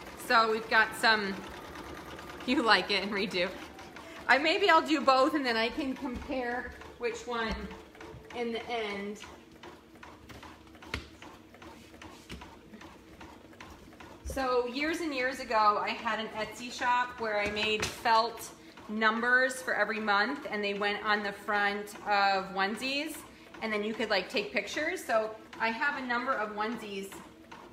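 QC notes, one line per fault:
No technical faults are audible in the signal at any point.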